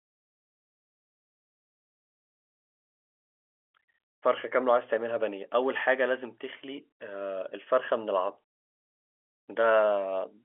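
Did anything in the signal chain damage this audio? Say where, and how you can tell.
No, nothing in the signal chain damaged this audio.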